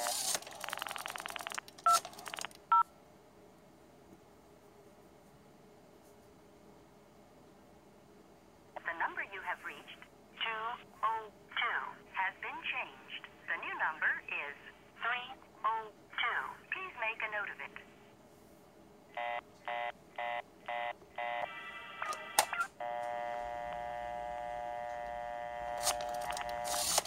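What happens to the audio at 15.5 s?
Nothing goes wrong at 15.5 s; the audio plays through that moment intact, with no dropout, click or distortion.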